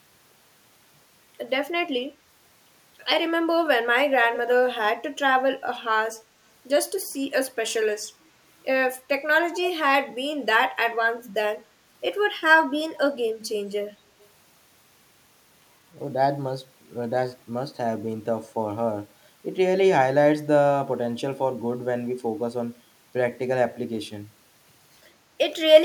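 Speech, where a far-end echo canceller likely let loudspeaker pickup through, causing echo leak: brief copies delayed about 200 ms at 4.34–4.38 s (faint) and 14.21–14.28 s (very faint).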